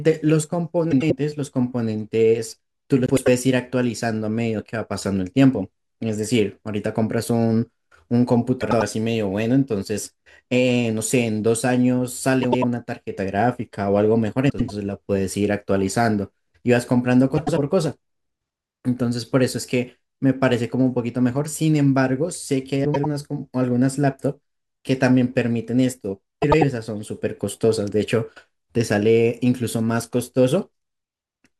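Neighbouring runs of frames arrived in the wrong order and were decoded that way, so frames were out of order at 0.91, 3.06, 8.61, 12.43, 14.49, 17.37, 22.85 and 26.42 s. Each time, two roughly 96 ms blocks swap places, a size that fits runs of four frames. The speech flutters briefly, and no time is lost.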